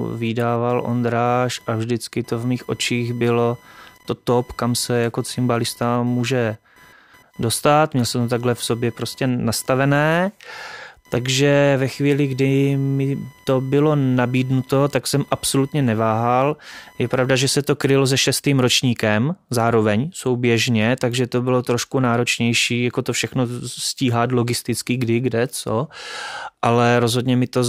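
Load changes in the computer, from processor, graphics or mouse activity, disturb the ground shared with the audio circuit, and that shifting ground reaches the recording as computer activity noise. From the start to 17.57 s, just before "to krylo se šestým", a buzzing, chirping layer runs under the speech, pulsing at around a thousand times per second and sitting roughly 30 dB below it, rising and falling with the machine's workload rather than with the speech.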